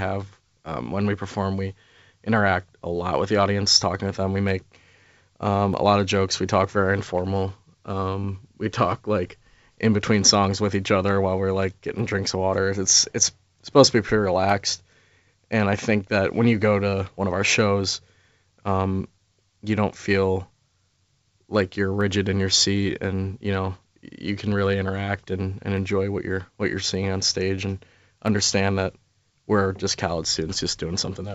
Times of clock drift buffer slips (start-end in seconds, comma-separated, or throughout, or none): 0.73-30.78